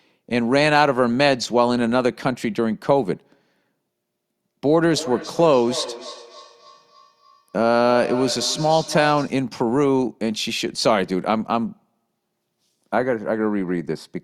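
From 4.91 to 9.43 s there's feedback echo between two devices: a second device on the call is replaying this mic's audio, which gets picked up again. Each word returns roughly a third of a second later, thinner and ringier, peaking about 13 dB below the speech.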